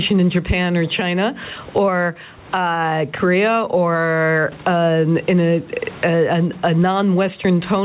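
A short speech recording with gain pumping from start to finish. The swing is around 20 dB. Loud and quiet passages sit unnaturally close together, and the result sounds squashed. The likely cause is input gain set far too high, with a fast limiter or compressor pulling it down on each loud sound. The call codec's band edge at 4 kHz is also audible.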